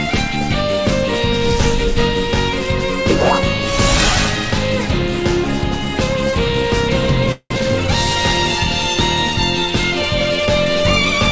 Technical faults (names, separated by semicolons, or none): call audio freeze; skip ahead